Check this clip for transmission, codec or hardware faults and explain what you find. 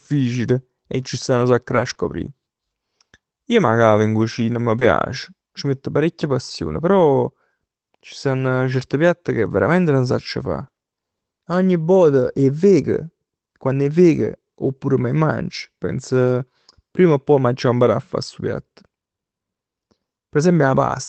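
Three kinds of packet-loss fault are present, all in a speech clip carried over an Opus call path whose audio tops out near 8 kHz.

Lost packet rebuilt from error correction: at 1.69–1.91 s just after "nu sacc", 1.97 s, 4.81 s and 6.21–6.31 s. The decoder plays low-bitrate backup copies carried in the following packets, so there is no gap, but those frames sound rougher and noisier.

Short concealed packet loss: at 1.93–1.97 s and 4.79–4.83 s, the latter right after "cavo in cucina m'". The receiver extends the previous sound across each missing 20 ms, giving a brief smear or wobble.

Repeated packet loss (robotic sound): at 10.59–10.79 s, three separate gaps leave about 30% of the span concealed. The repeated patching sounds choppy, with fragments missing.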